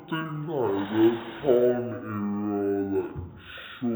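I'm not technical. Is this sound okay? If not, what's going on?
No. Throughout, a stereo recording was read as mono, its two channels run together as one, so the speech plays at half speed and a full octave lower.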